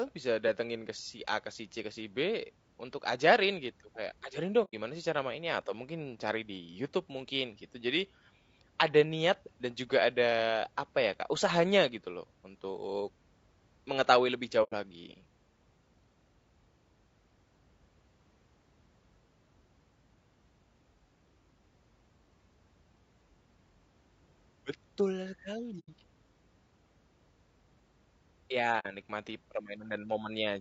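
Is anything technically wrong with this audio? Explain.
Yes. Throughout the speech there is low-delay AAC compression: the voice sounds rough and grainy, with noise filling the gaps between pitch harmonics and a thin, synthetic-sounding top band. Short codec frames resolve harmonics poorly, and this level of damage fits AAC-ELD at around 32 kbps, the likely cause. Unlike broadband hiss, the grain tracks the voice and vanishes in pauses.

There are also four AAC frame losses with muting, at 4.64–4.74 s (just before "sih cara mainnya atau"), 14.63–14.73 s (just after "mengetahui lebih"), 25.79–25.89 s, and 28.79–28.86 s. Each leaves a gap of about 90 ms, or 60 ms for the last. The gaps match two or three zeroed frames, and overlapping windows fade the sound out and back in. This gives a soft-edged hole.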